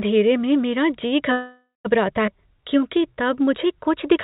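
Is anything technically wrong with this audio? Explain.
Yes. There are three faults, all in the middle of the clip. The speech has nothing above 4 kHz throughout, which fits a G.711 mu-law call path.

Call audio freeze, 1.32 to 1.87 s, right after "में मेरा जी". The likely cause is that packets were held up in transit, so the jitter buffer ran dry. The receiver stretched the last sound into a fading buzz or hiss, then about 170 ms of silence. The whole pause lasts 526 ms. When packets resumed, the speech continued where it stopped. Nothing is lost, but a gap has been inserted.

Skip ahead, 2.27 to 2.30 s. Here roughly 150 ms of speech is gone. Later audio was already waiting, so that stretch was dropped, either in transit or by the jitter buffer. Playback jumps forward almost directly. Only about 9 ms of filler bridges the two sides.

Jitter buffer slow-down, 2.38 to 3.45 s. The buffer was refilling its reserve. 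It repeated single pitch periods and bits of pauses many times over. This added 132 ms, so speech plays at about 88% speed. The pitch stays the same. Sounds are drawn out and slightly sluggish.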